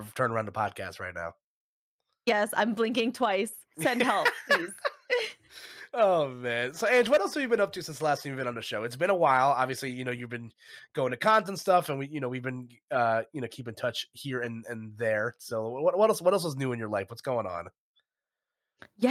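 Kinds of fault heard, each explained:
No technical faults are audible.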